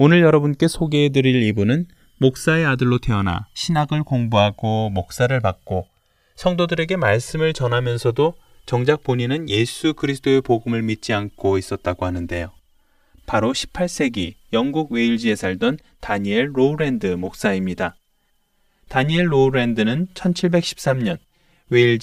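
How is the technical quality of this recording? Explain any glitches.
The recording has one fault running through the whole speech clip: channels drifting apart.

From start to finish, the two channels were captured on devices with independent clocks that disagree by something like 300 ppm, so the delay between them keeps growing and reaches around 5 ms by the end. Summing them to mono creates comb-filter notches that sweep slowly through the spectrum, heard as slow flanging on the speech. A spectrogram shows evenly spaced dark bands that glide gradually and draw closer together as the delay increases.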